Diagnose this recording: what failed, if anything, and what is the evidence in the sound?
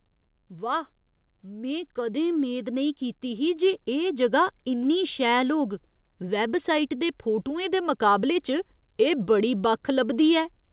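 Automatic gain rising from 1.46 s to 5.26 s, in the call processing stage: the speech and the background noise floor swell together by about 8 dB over nearly four seconds, settling just before "होग वैबसाइट दे फोटुएं". The AGC judged the input too quiet and raised its gain gradually, lifting everything rather than the voice alone. The audio stops at 4 kHz, which fits the G.711 A-law call codec.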